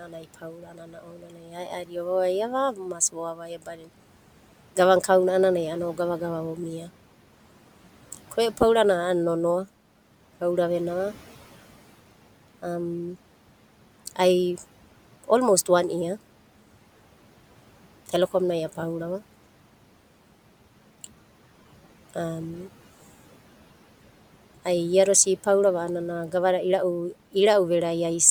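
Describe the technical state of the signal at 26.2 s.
At 26.2 s the speech signal is intact, with only the room's own background noise sitting about 22 dB below the speech.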